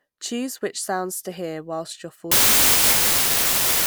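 From 2.32 s on, a wrong sample width, which fits packed 24-bit data read as 32-bit, buries speech sped up 1.33 times in loud broadband noise, flooding the spectrogram.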